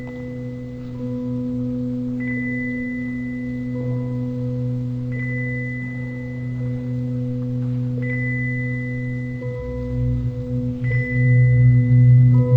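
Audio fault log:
Throughout: stereo read as mono. The whole clip runs at half speed and sits a full octave (12 semitones) low, so everything drags and sounds deep and sluggish. What's going on is that the left and right samples, which alternate in the file, are being read back to back as one channel. Each moment gets twice as many samples as it should, which halves the playback rate. That's also where the mirrored copy of the sound up in the top half of the spectrum comes from.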